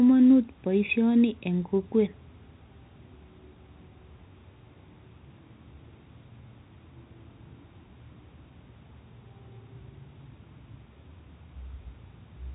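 No technical faults are audible.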